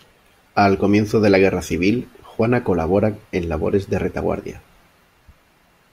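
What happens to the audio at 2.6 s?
Nothing goes wrong at 2.6 s; the speech carries on intact through that moment.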